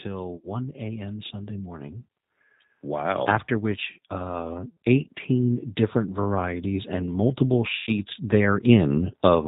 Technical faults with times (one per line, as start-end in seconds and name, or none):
0.00-9.47 G.729 codec
0.37-0.56 VoIP packet loss concealed by the speech codec
2.82-9.43 automatic gain rising
4.68-4.77 VoIP packet loss concealed by the speech codec
7.76-7.95 VoIP packet loss concealed by the speech codec